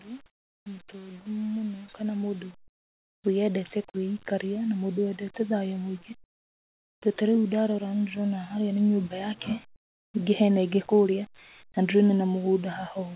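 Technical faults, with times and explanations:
0.05–6.09 s, automatic gain rising: voice and background swell together by about 14 dB over six seconds as the gain control slowly lifts a quiet input.
0.26–0.66 s, 2.68–3.24 s, 9.76–10.14 s (just before "ningĩ hena ĩngĩ kũrĩa"), comfort noise in place of the background: pauses become flat, featureless hiss, about 8, 25 and 24 dB quieter, likely synthetic noise filling untransmitted silence.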